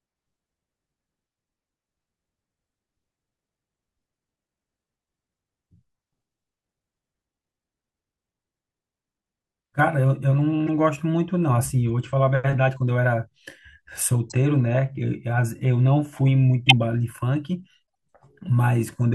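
Around 10.67 to 10.69 s there's a short blip, then a fainter one at 11.89 s, another at 14.30 to 14.32 s, and the loudest at 16.69 to 16.73 s. Each is a corrupt frame decoded: flipped bits in the compressed speech, which the decoder played anyway. The misread gains and codes put energy at the wrong frequencies for a frame or a few, so you hear chirps and noise bursts, peaking between about -30 dBFS and 0 dBFS.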